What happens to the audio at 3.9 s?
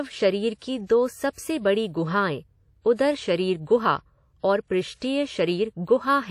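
At 3.9 s you're hearing the same thing that runs through the whole clip: the speech has a ringing, washy smear with a hiss that swells and fades with the voice, and nothing comes through above about 16.3 kHz. That's likely WMA compression. A transform codec like this spreads its quantisation noise over tens of milliseconds and drops weak detail, which fits a low bitrate around 48 kbps, and the damage is plainly audible.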